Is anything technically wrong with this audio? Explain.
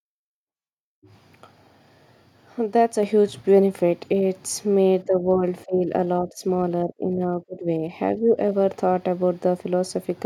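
Yes. At 3.03 s there is a microphone volume stepped up fault: the input gain on the capture device rises by about 4 dB in a single step, likely set by the call software reacting to low level. Speech and background noise both jump louder together.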